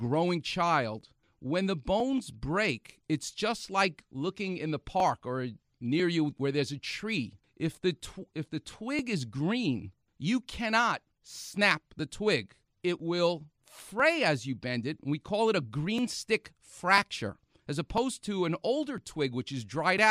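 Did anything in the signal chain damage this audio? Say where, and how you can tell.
Yes. Periodic USB or driver dropouts occur at the driver or buffer stage: roughly every 1.00 s from 1.01 s to 19.98 s, a stall skips about 2 ms of audio. Where a joined gap falls during speech it leaves a tick, on a once-a-second grid.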